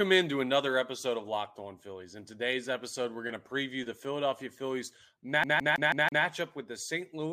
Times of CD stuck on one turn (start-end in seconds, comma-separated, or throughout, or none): 5.44-6.25